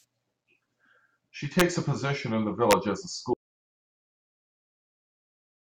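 At 1.6 s and again from 2.71 to 2.73 s there's integer overflow: peaks pushed about 3 dB and then about 2 dB past full scale wrap to the opposite sign instead of being limited, so you get harsh, violent cracks far nastier than ordinary clipping. Then at 3.34 s the speech cuts out into an audio dropout to silence that lasts right to the end. It's plain silence with no room tone at all, most likely because the input was lost while the recorder kept writing samples.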